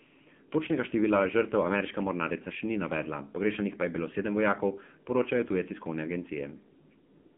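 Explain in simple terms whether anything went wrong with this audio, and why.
AMR narrowband mobile codec damage runs through the whole clip. This phone-network codec passes only 150 Hz to 3.4 kHz, with nothing above 3.5 kHz, and rebuilds speech from a simple vocal-tract model with few bits, so it sounds muffled, buzzy and synthetic.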